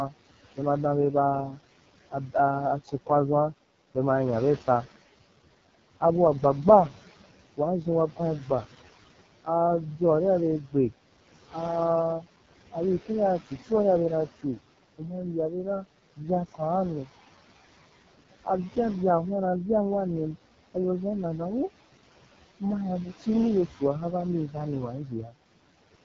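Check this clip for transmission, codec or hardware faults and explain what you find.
Two faults run through the whole speech clip: noise suppressor artifacts and heavy AMR wideband (HD Voice) codec damage.

Noise suppressor artifacts, throughout: a noise suppressor judges band by band, frame by frame, which parts are steady noise and pulls them down, here by about 17 dB. The room noise, which sits about 15 dB below the speech, drops away in the gaps and returns under each phrase.

AMR wideband (HD Voice) codec, throughout: the speech is rebuilt from a pulse-excited vocal tract model, with the top of the band filled by shaped noise rather than real detail, and nothing above 7.4 kHz. The coding is very coarse, which fits the lowest 6.6 kbit/s mode. The voice comes through rough and raspy.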